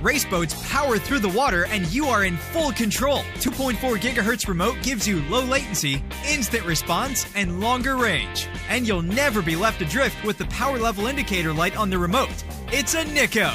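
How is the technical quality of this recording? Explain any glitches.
The recording is clean until about 10.28 s, when a crude rate conversion sets in and lasts to the end at 13.54 s. Samples are being repeated on a nearest-neighbour basis, which fits a conversion from 32 kHz to 44.1 kHz without any anti-imaging filter. The irregular repetition pattern, governed by that ratio, produces inharmonic error components roughly 20 dB below the sound. They are heard as a gritty fizz tracking louder, brighter passages. A spectrogram shows mirrored, non-harmonic lines and haze above the original content. Zoomed in, the waveform shows small staircase steps.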